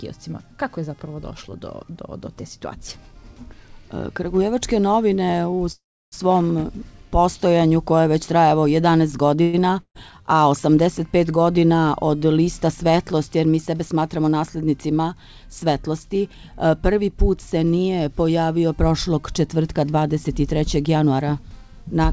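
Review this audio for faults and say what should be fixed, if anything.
Call audio freezes at 5.72 to 6.14 s and 9.42 to 9.55 s, likely from delayed packets emptying the jitter buffer. The last sound is stretched into a fading buzz, going silent for about 0.32 s in the first, before resuming with nothing lost.

A burst of packet loss at 9.81 to 9.97 s drops about 200 ms of audio. The receiver fills the hole with the last sound fading down, then jumps ahead.

Jitter buffer speed-ups at 13.71 to 14.44 s (109%) and 19.68 to 21.20 s (108%) trim excess buffered delay by cutting pitch-period slices. This removes roughly 70 ms and 150 ms, and the sound rushes at unchanged pitch.

Stabilising the network path and adding loss protection such as FEC would prevent the freezes and loss, and therefore the catch-up speed-ups.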